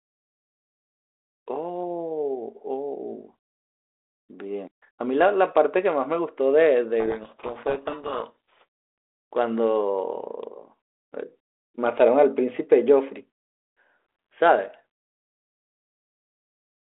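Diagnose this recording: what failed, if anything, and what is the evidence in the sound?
Codec stage. From 7.0 to 8.64 s, a codec payload misread buries the speech in harsh distortion. This fits G.726 code words decoded in reversed bit order.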